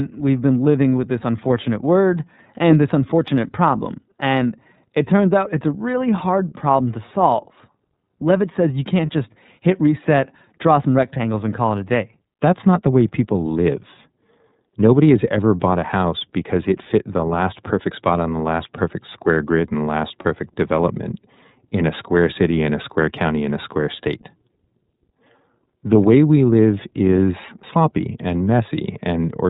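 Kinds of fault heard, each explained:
iLBC codec: the speech was squeezed through iLBC, a narrowband VoIP codec running at 13.33 kbps with 30 ms frames, each coded on its own. Everything above 4 kHz is gone, and the voice comes out plainly rough and somewhat synthetic throughout.
Lost iLBC frames: two packets failed to arrive, each carrying one 30 ms frame, so the decoder filled the gap by repeating the last pitch cycle with noise. Just after "says you" at 9.06 s and before "development in a square" at 20.22 s, a brief buzzy held vowel replaces the sound, then clean decoding resumes immediately.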